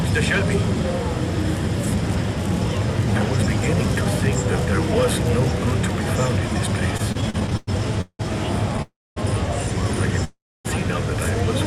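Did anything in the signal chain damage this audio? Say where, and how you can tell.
Yes, and it's the network side. From 6.97 to 8.21 s there are repeated stalls (stutter): ten short hitches, the longest 178 ms, about 0.4 s filled in all, a third of that stretch. Packets kept arriving late, the jitter buffer kept draining, and the receiver stretched the last sound each time.

Then two call audio freezes, at 8.82 to 9.18 s and 10.24 to 10.67 s. Each holds the last sound briefly, then fades to silence for about 240 and 280 ms before resuming where it left off. The likely cause is packets held up in transit, emptying the buffer.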